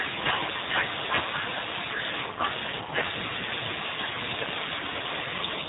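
From start to end, the speech carries plainly audible G.729 codec damage. The encoder rebuilds each 10 ms frame from a vocal tract filter, pitch predictor and sparse pulses, which fits G.729A at 8 kbit/s, leaving a rough, synthetic timbre with nothing above 3.8 kHz.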